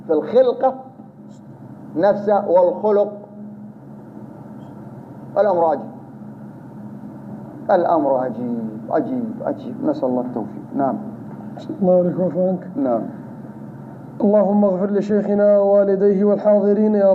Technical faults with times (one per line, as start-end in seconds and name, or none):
none